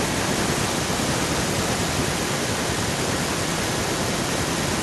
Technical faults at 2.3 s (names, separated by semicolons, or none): echo with no canceller